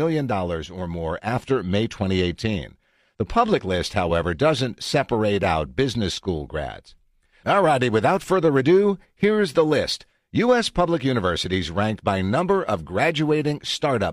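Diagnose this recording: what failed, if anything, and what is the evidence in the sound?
Nothing in the chain has failed: the speech signal is continuous and holds a steady level, with no audible trace of trouble at any stage from capture through to playback.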